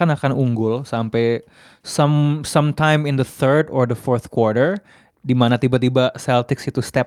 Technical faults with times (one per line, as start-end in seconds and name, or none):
none